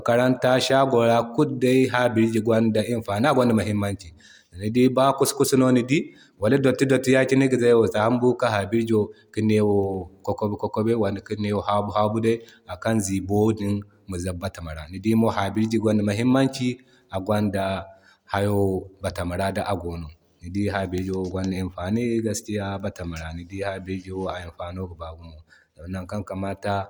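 No technical faults detected.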